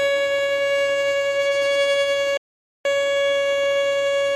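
At 2.37 s the sound cuts out abruptly, mid-flow. Silence holds for about 0.48 s, until 2.85 s, then the audio resumes. This is a playback stall. The player likely ran short of data or had its output thread blocked, so nothing reached the output until it recovered.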